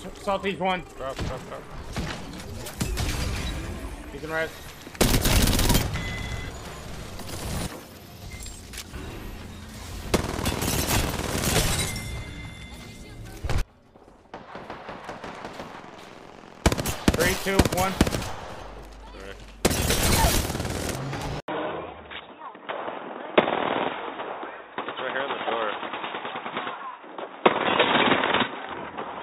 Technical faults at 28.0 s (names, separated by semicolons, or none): input switched to a poorer device